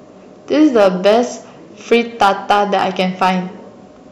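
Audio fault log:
0.61–1.20 s and 1.92–3.30 s, hard clipping: the speech peaks drive past what a stage can pass, by about 4 dB in the first stretch and about 7 dB in the second, so each peak is sliced flat. The flat tops add harmonics high up, heard as crackle on louder syllables and a harsher fuzz in the later stretch. The waveform shows squared-off peaks pinned at the limit; a spectrogram shows broadband energy smeared upward over those spans.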